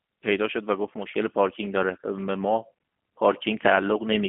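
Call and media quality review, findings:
G.729 codec, whole clip: speech rough and plainly synthetic, band confined to roughly 150 Hz–3.5 kHz. Frame-by-frame pulse and pitch-model rebuild, consistent with 8 kbit/s G.729A. Unlike plain narrowband filtering, texture itself is buzzy, not merely muffled.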